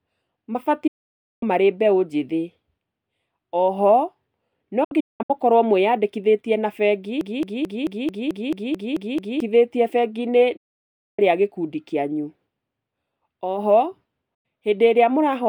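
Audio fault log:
0.87–1.43 s, 4.84–5.30 s, 10.57–11.19 s, 14.34–14.46 s: digital broadcast dropout. The speech fades out over about 8 ms and goes silent for roughly 0.54 s, 0.32 s, 0.61 s and 0.1 s. At 4.84 s the silence is split into short holes across 0.45 s, the longest 0.19 s. Each time the receiver lost or rejected the signal and muted until valid data returned. The lengths fit whole frames of about 32 ms, and the missing speech never comes back.
7.21–9.41 s: broken-record loop. A 0.22 s fragment of speech repeats exactly ten times back to back, a stuttering mechanical cycle of about 4.6 repeats per second. The playback chain likely stalled and kept re-sending the last fragment it held, so the speech due in those two seconds is lost.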